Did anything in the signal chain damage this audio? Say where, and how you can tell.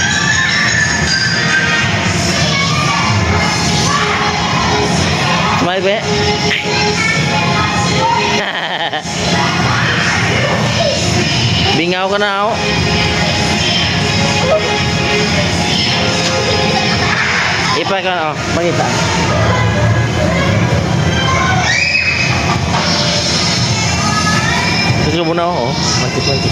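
Yes. There is gain pumping, and it runs through the whole clip. The swing is around 10 dB. Loud and quiet passages sit unnaturally close in level, so the sound feels squashed. The likely cause is input gain set far too high at the microphone preamp, with a fast limiter or compressor later in the chain hauling the level down on each peak.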